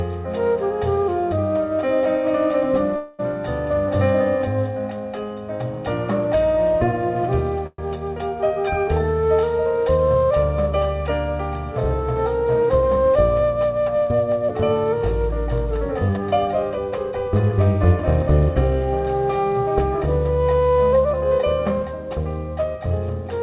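At 2.96 s a call audio freeze begins and lasts until 3.21 s. The last sound is stretched into a fading buzz for about 226 ms, then the audio resumes where it stopped, now 226 ms later. A second freeze at 7.67 to 7.80 s fills 116 ms and decays to 20 ms of silence. The likely cause is packets stalling in transit so the jitter buffer ran dry. On a spectrogram each freeze shows smeared, repeating horizontal bands that fade. The waveform shows a decaying envelope.

From 12.45 to 13.41 s a jitter buffer speed-up plays the sound 8% fast, trimming roughly 70 ms in many pitch-period-sized cuts. The same happens more strongly from 16.10 to 17.29 s at 120%, removing about 300 ms. The receiver was shedding excess buffered delay. Pitch holds but the sound feels hurried. The spectrogram shows events compressed in time with unchanged harmonic spacing. In the waveform, cycles are periodically dropped. Across the clip the call path's band limit is visible as nothing above 4 kHz, which fits G.711 mu-law at 64 kbps.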